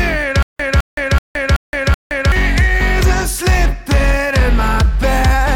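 From 0.43 s to 2.32 s the audio breaks into a stutter with silent gaps. A fragment of about 209 ms plays five times in a row, each repeat followed by roughly 170 ms of dead digital silence, giving an even cycle of about 379 ms. The likely cause is a player or stream stall, where each retry replays the last buffered fragment and then runs dry. Whatever should have played in that stretch is lost.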